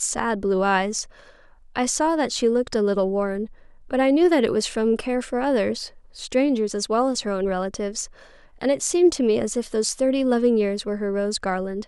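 No glitches, dropouts or other technical faults turn up anywhere in this speech recording, so there's nothing to flag.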